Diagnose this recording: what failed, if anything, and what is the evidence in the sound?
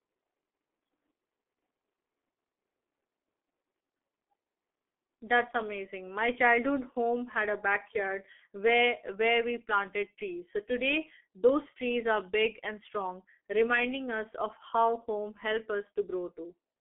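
The failure sits at the codec stage: the speech has been through a G.723.1 codec, heavily damaged across the whole recording. This early telephony coder rebuilds speech from a coarse model refreshed once per 30 ms frame, at a rate that fits roughly 6 kbit/s. The evidence is a narrow telephone band of about 250 Hz to 3.4 kHz, with nothing above 3.5 kHz, so the speech sounds muffled and hoarse, and consonants smear together.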